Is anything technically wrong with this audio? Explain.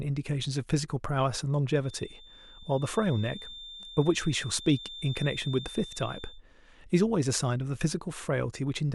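Yes. From 1.79 to 6.43 s a feedback whistle at 3.6 kHz sits about 15 dB under the speech, likely a speaker-to-microphone loop held just below runaway.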